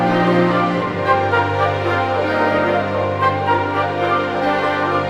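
Nothing technically wrong can be heard anywhere in this audio.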